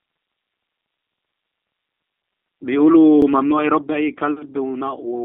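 Speech processed in 2-second overlapping chunks, each starting 50 ms early, replays that slice at 1.17–1.22 s and 3.22–3.27 s, heard as stutters.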